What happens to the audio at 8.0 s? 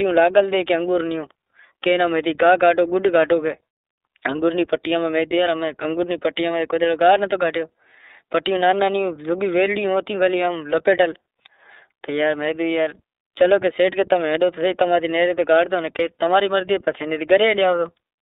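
At 8.0 s, as throughout, the speech carries iLBC codec damage: limited to 300 Hz to 3.7 kHz, coded in independent 30 ms frames, plainly rough and synthetic.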